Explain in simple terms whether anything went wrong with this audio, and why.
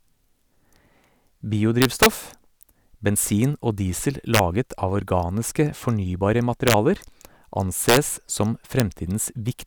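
Several violent cracks break into the speech. They come at 1.82 to 2.06 s, 4.35 to 4.39 s, 6.68 to 6.74 s, 7.89 to 7.97 s, and a single one at 8.8 s. This is integer overflow. The loudest moments pushed the numbers past the biggest value the system can hold. Instead of stopping at the limit, they wrapped around to the opposite extreme. That sudden jump sounds far harsher than ordinary clipping.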